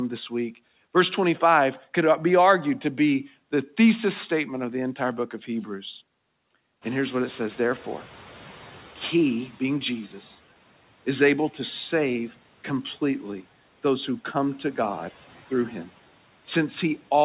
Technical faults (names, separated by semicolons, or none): noise suppressor catching up